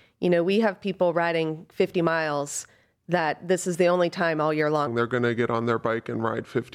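From 4.87 s to the end of the clip, the speech drops into a section at the wrong speed: it's running at about 0.8 times its proper rate, so everything slows and sinks roughly four semitones in one go. Because pitch and tempo shift together, the voice suddenly sounds heavier and draggy. That's most likely a playback or editing step fitting this stretch to the wrong clock, rather than anything in the original recording.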